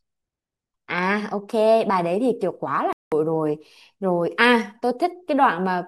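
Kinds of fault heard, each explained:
Digital broadcast dropout: The speech drops out at 2.93 s and stays silent until 3.12 s. That hole lasts about 0.19 s. The receiver stopped getting usable data, or the frames it got failed their error check. So it muted the output rather than play corrupt audio. The gap fits roughly six lost frames of about 32 ms each. Whatever was said in that stretch is gone. The speech resumes further on once good frames arrive.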